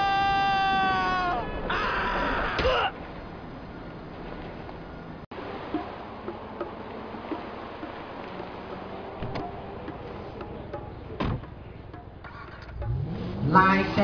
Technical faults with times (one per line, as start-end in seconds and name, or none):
none